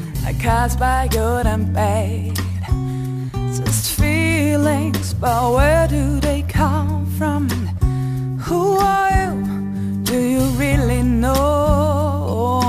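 A fine hiss and grainy roughness runs through the whole clip, swelling on loud and bright passages and falling away in quieter moments. This is sample clock jitter: the converter's timing wanders by around 5 microseconds, so each sample lands a little early or late. Where the waveform moves fast, that timing slip becomes an amplitude error, roughly 25 dB below the signal, which is why the grit tracks level and high-frequency content.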